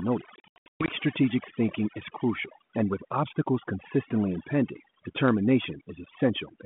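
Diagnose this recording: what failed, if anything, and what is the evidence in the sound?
Packet loss on an ADPCM call, a network-stage failure, runs from 0.36 to 0.89 s, just before "strategic thinking is crucial". Roughly 360 ms of audio drops out in hard-edged silent gaps spread over about 520 ms, the longest lasting 120 ms. That pattern points to somewhere around twenty lost packets. After each hole the speech comes back slightly distorted for a brief moment. This happens because the receiver's adaptive predictor and step size no longer match the sender's and have to settle again. On a waveform the gaps show as flat silent runs with abrupt edges. A spectrogram shows blank vertical slices.

Overdone noise removal in the call processing stage affects the whole recording. The suppressor was set too aggressively, so any frequency band it judges close to its noise estimate is pushed far down or cut entirely, and the quieter parts of the speech are removed along with the noise. 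The pauses fall to near silence with twinkling specks, and the speech sits within the 32 kbit/s G.726 telephone band that tops out at 3.4 kHz. A spectrogram shows a dark, empty background scattered with isolated bright dots, and the speech harmonics look patchy and ragged at their edges.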